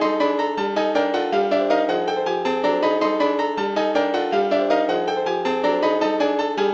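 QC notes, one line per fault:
No technical faults are present in the signal, with level, continuity and timing holding steady across the whole recording.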